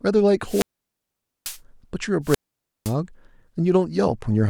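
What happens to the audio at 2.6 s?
A wireless microphone squelch dropout runs from 2.23 to 2.95 s, and 2.6 s falls inside it. The analogue FM radio link weakens until the receiver's squelch decides the signal is no longer trustworthy and shuts its output off. A brief swell of hiss and static comes first, then the output is muted for about 0.51 s, leaving a hole of near silence before the speech comes back as the signal recovers.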